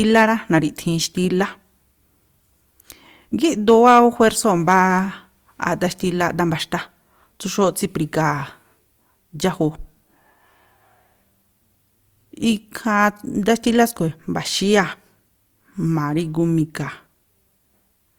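Hard clipping occurs at 0.17 to 0.23 s, again from 3.68 to 4.28 s, and briefly at 4.69 to 4.82 s. In each case the speech peaks exceed what a stage in the chain can carry, by about 3 dB, 4 dB and 2 dB, so the waveform tops are sliced flat. Those flat edges create added high harmonics, heard as a gritty crackle riding the loudest syllables, most sustained in the longer middle stretch.

CD scratch ticks follow between 5.69 and 6.74 s: five short clicks spaced roughly once per disc revolution, about five a second. A surface scratch wipes out more data than the player's error correction can restore on each pass, so the player patches or mutes the damaged samples. Each gap lasts only a couple of milliseconds at most, heard as a regular ticking of uneven strength.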